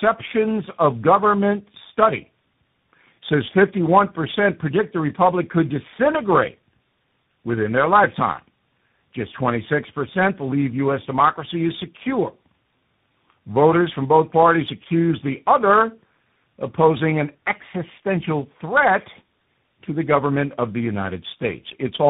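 Speech with tandem speech coding throughout: nothing above 3.8 kHz, and a compounded roughness and warble suggesting three successive coders, likely ending in CVSD, beyond what one codec gives.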